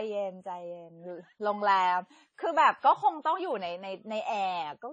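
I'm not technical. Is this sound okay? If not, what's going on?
No. Throughout the speech the sound is dull, with nothing above about 9 kHz, and has a smeared, watery roughness. The likely cause is transcoding between lossy codecs: the audio was squeezed by one compression format, then re-squeezed by another, stacking both sets of damage.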